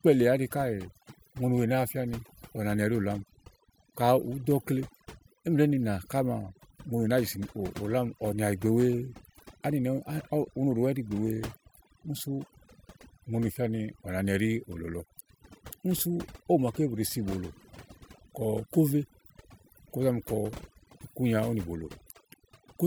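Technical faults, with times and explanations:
Throughout, overdone noise removal. The noise reduction was set too strong, so frequency bands near its noise estimate are pulled down or cut entirely. The background drops and breaks up into twinkling specks. Quieter parts of the speech vanish too.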